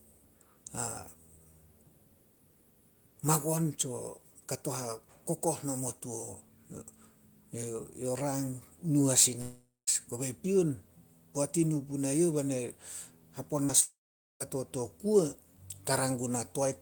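From 9.41 to 9.89 s a long network dropout, likely a stall in packet delivery, removes about 0.46 s of speech. The receiver stretches the last sound into a fading buzz, with a final 0.2 s of near-silence. On a spectrogram, smeared, flattened harmonics decay into a blank gap before speech resumes.

At 13.65 to 13.71 s, short concealed packet loss covers about 40 ms with extrapolated audio. It is heard as a brief smear, and it shows as a short patch of blurred, repeated spectral texture.

From 13.81 to 14.42 s a second long network dropout loses about 0.6 s. The buzz dies quickly, and roughly 0.47 s of silence follows, which appears as a flat waveform and an empty spectrogram band.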